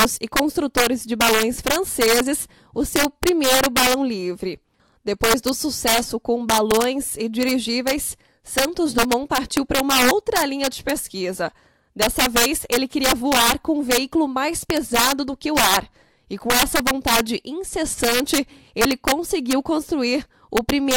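Integer overflow runs through the whole clip. The signal was driven about 6 dB too hot. Peaks that crossed the integer limit wrapped to the opposite sign instead of being held. Only a small share of samples, roughly one or two percent, are affected. Each one is heard as a harsh, violent crack on loud moments, far sharper than ordinary clipping.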